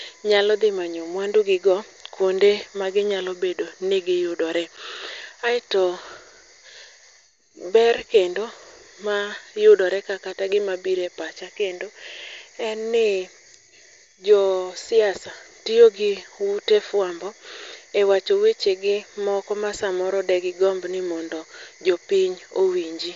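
At 4.77 s, just after "ma ginyalobedo ni giyudore", unconcealed Bluetooth headset packet loss leaves a 7.5 ms hole with hard edges. It shows as a flat waveform gap and a thin vertical spectrogram stripe across the mSBC band up to 8 kHz.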